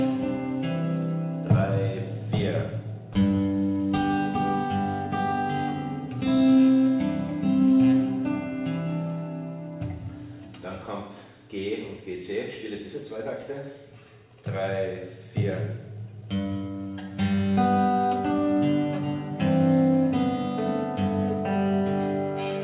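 Nothing here calls for a fault report: the audio came through an ordinary call path with narrowband telephone coding that holds the sound under 4 kHz, and no dropouts, glitches or other problems turn up anywhere along the way.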